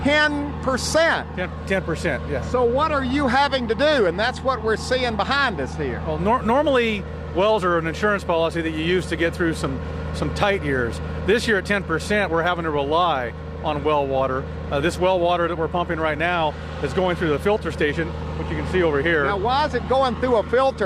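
Clock drift between sender and receiver runs through the whole recording: the sender's clock runs roughly five percent fast, so the receiver's jitter buffer keeps overfilling and has to shed audio to keep latency from growing, which gives the sound a faintly hurried, uneven pulse. The result is repeated timing corrections from 0.07 s to 20.75 s, with playback running at 105% of normal pace, each correction a tiny cut that shows on a waveform or spectrogram as an abrupt seam where the signal jumps without a smooth join. These seams come at irregular intervals rather than a steady rhythm, and each is heard, if at all, as a slight hiccup or skipped instant.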